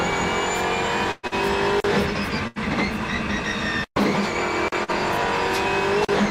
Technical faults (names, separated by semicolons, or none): burst of packet loss; short concealed packet loss